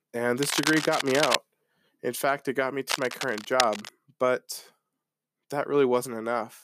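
Two bursts of harsh scratching and rustling sit over the speech, from 0.38 to 1.37 s and again from 2.90 to 3.91 s, only a few decibels below it. This is cable scratch noise, likely from a worn cable or connector whose contact resistance flickered as it moved.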